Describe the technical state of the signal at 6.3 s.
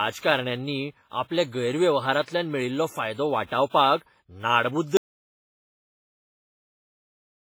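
At 6.3 s there is dead silence with no room tone beneath it. It is an audio dropout to silence that begins at 4.97 s and runs to the end of the clip, cutting the speech off mid-flow. The input signal was most likely lost, through a disconnected source, a broken link or an accidental mute, while recording or encoding carried on writing silence. Whatever was spoken during this stretch is gone.

WMA compression also applies across the whole clip, including this point. Before the gap, the speech sounds washy and ringing, with a smeared, breathing hiss that rises and falls with the signal, and the damage is heavy. That character points to a low bitrate of around 24 kbps. The likely cause is the transform codec's long blocks spreading quantisation noise over tens of milliseconds and zeroing weaker spectral detail.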